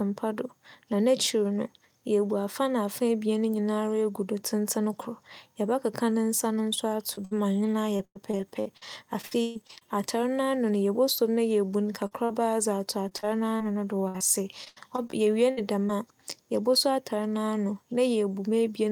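Short concealed packet loss at 7.15 to 7.19 s: about 20 ms of the speech arrived too late for the decoder, and the receiver bridged the hole by extending the preceding sound before blending back into the real signal. The patch is brief enough that it reads as a brief smear or wobble rather than a gap, though a quick consonant falling inside it could be lost.

A burst of packet loss follows almost at once, at 7.25 to 7.33 s, just before "ma ͻnye". Here about 60 ms went missing in a row. The receiver kept extending the last sound and let it fade as the hole lengthened, so a voiced stretch turns into a short held buzz and other sounds into a decaying hiss. The speech then resumes partway on, with that slice gone.

Repeated packet loss (robotic sound) runs from 7.97 to 9.83 s. Twelve separate holes add up to about 500 ms of lost audio, the longest 134 ms, and roughly a quarter of the stretch is synthetic fill. 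Each patch has barely ended before the next begins, so the speech turns choppy, with pieces missing.

Two more short concealed losses fall at 12.07 to 12.13 s and 12.25 to 12.31 s, each about 40 ms. These are longer than the first, heard as a quick wobble or smear where the real audio briefly drops out.

Repeated packet loss returns from 13.09 to 15.91 s, with fourteen gaps totalling about 420 ms and the longest 82 ms. The holes are shorter and more spread out than in the earlier stretch, and only around a seventh of the span is filled in. The result is a lighter but persistent robotic choppiness across these three seconds.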